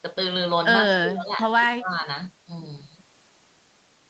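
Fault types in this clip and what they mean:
Speech suppressed in double talk: The speech dips twice, by up to about 20 dB, near 1.04 and 1.6 s. An echo canceller likely ducked it during overlapping talk.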